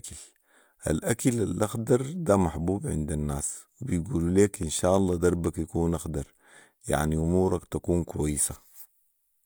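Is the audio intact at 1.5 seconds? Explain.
Yes, the audio at 1.5 seconds is intact, with no dropout, click, distortion or other fault at that point.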